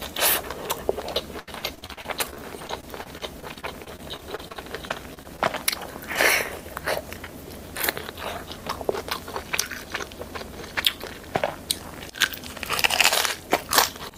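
From 1.39 s to 5.40 s the audio shows repeated packet loss (robotic sound). Close to thirty short holes follow one another, each patched by stretching the last fragment, which covers about 0.64 s in all, while roughly half a second is simply gone. The longest hole is 78 ms. The result is a choppy stutter. Unlike a single dropout or steady codec smearing, it recurs densely across those four seconds and then stops.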